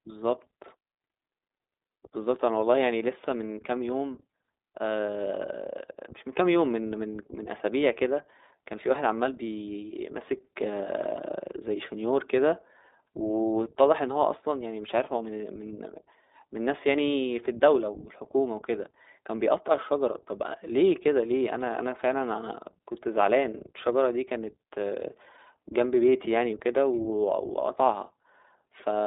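The whole speech clip runs through the iLBC codec. Everything above about 3.8 kHz is gone, leaving a thin 300 to 3700 Hz telephone band. Each short frame is coded on its own, which fits 20 ms frames at 15.2 kbps, so you plainly hear a rough, slightly synthetic edge.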